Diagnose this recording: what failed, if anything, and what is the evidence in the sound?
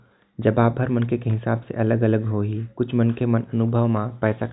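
Nothing failed, and the sound gives no evidence of any fault in this recording.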